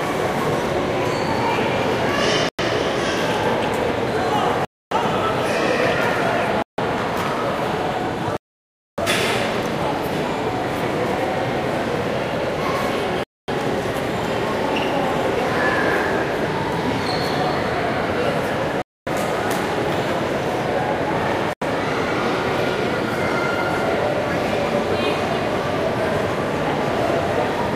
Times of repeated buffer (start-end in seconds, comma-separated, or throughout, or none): none